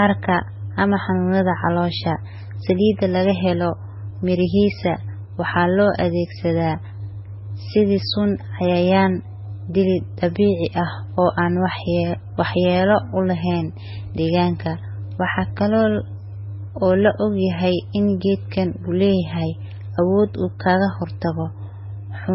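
Throughout, the speech sounds dull and band-limited, with nothing above 5.6 kHz, and two different layers of smeared, swirly artefacts overlap. The likely cause is transcoding between lossy codecs: a very low-rate MP3 pass re-encoded to Vorbis, the second stage compounding the first's damage.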